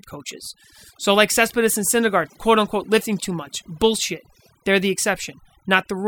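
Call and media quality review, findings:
Overdone noise removal, whole clip: noise suppressor set too aggressive, pulling individual frequency bands down or off near its noise estimate, taking quiet speech components too. Background drops, breaking up into twinkling specks.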